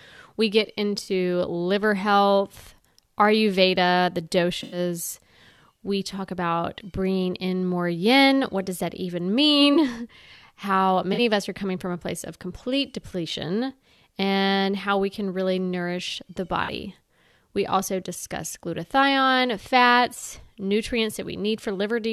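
At 1.03–1.09 s, 4.63–4.78 s, 9.74–9.77 s, 11.13–11.19 s and 16.64–16.70 s the speech shows a corrupt frame concealed: the decoder caught damaged AAC frames and covered them.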